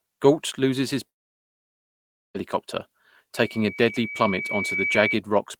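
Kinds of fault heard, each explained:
Long network dropout: Right after "loses his", at 1.09 s, the speech cuts out and doesn't resume until 2.36 s, so about 1.26 s of audio is simply gone. What fills the hole is essentially silence rather than the words, and when sound returns it picks up further along with nothing recovered. That pattern is most likely a stretch where packets stopped arriving and the receiver had nothing to play.
Loudspeaker feedback squeal: From 3.35 s to 5.20 s a single tone at 2.3 kHz creeps in and swells over roughly a second and a half, ending up about 5 dB louder than the speech itself. That's the classic loop: a mic hearing the speaker it feeds, with the gain at that one frequency tipping past unity so the tone keeps feeding itself and growing on its own.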